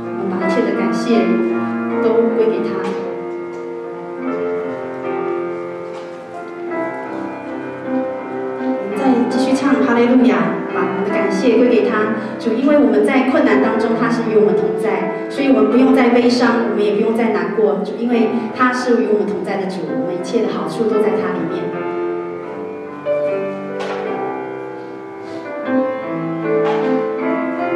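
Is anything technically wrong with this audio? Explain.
No, nothing technically wrong can be heard here.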